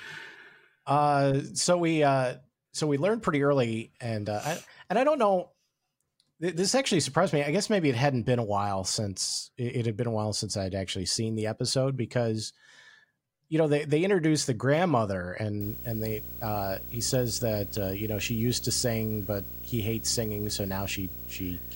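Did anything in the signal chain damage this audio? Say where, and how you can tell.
Yes. From 15.61 s to the end at 21.76 s the speech picks up video or display buzz, an analogue wiring problem: a screen or video cable is coupling into the audio line. It sounds like a rasping buzz at the 59.94 Hz field rate with hash above it, roughly 10 dB below the signal, plus a whine at the 15.7 kHz line rate. A spectrogram would show a comb of harmonics spaced at 59.94 Hz and a steady line at 15.7 kHz. Both start at 15.61 s.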